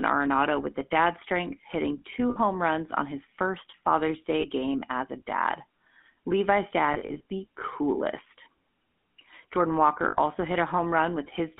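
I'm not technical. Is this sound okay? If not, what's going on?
No. The whole clip went through the GSM full-rate codec, an old mobile-phone voice format. It sounds buzzy and gravelly, with everything above phone-line range cut off.

There are also lost GSM frames, where chunks of the signal dropped out and the gaps were filled by stretching the last good bit into a brief metallic ring. These happen at 2.3 to 2.38 s, just after "the dad strength hitting"; at 4.4 to 4.45 s, just before "game as a dad"; scattered across 6.94 to 7.26 s, right before "the coolest"; and at 10.08 to 10.16 s.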